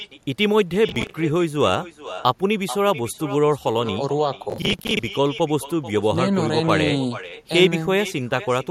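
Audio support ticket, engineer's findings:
Echo with no canceller: far end's loudspeaker feeds its mic, nothing removes it. Whole clip shadowed by a thinner copy of the speech, about 14 dB down, arriving roughly 0.4 s late after the network round trip.

Processor overload crackle at 0.89–1.14 s and 4.50–4.99 s: audio thread missing buffer deadlines in runs, each miss refilled with stale audio. Hard-edged repeats heard as gritty tearing, fitting roughly 10 ms buffers; second burst longer, more misses.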